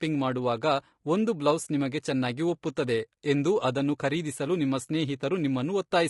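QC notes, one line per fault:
Throughout, low-delay AAC compression: the speech was likely coded with AAC-ELD at a low rate, consistent with about 32 kbps. Its short frames resolve pitch harmonics poorly, so the speech sounds plainly rough and grainy, with noise filling the gaps between harmonics.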